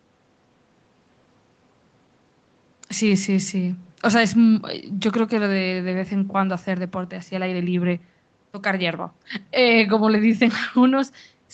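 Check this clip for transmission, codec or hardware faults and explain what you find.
No transmission, codec or hardware faults can be heard here.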